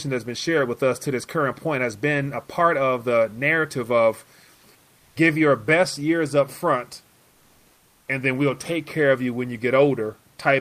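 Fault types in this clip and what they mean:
Comfort noise in place of the background: In two short pauses, 4.55 to 4.63 s and 4.97 to 5.15 s, the room noise gives way to steady, featureless synthetic noise about 2 to 3 dB quieter, likely from Opus discontinuous transmission halting audio during silence.
Onset clipped by the voice detector: At 5.13 s, roughly 20 ms at the start of the returning speech is missing and filled with comfort noise, so the sound begins abruptly without its soft attack, likely because the Opus voice detector reacted late.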